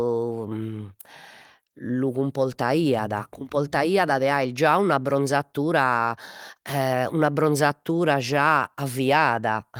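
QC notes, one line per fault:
Nothing to flag here; the speech runs along without a single problem worth a line.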